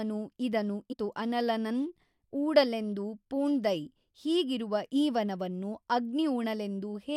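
At 0.92 to 0.94 s, just before "ಅನಲನನ್ ಊಡಲೆಂದು ಪೂಣ್ದಯ್", a brief glitch cuts into the speech, the mark of damaged data in a compressed stream. Corrupted bytes made the decoder misread the frame there, lose sync and hunt for the next valid frame header. Unlike a plain dropout, which leaves silence, or a simple click from a single bad sample, this fault comes from the decoder losing its place in the compressed stream.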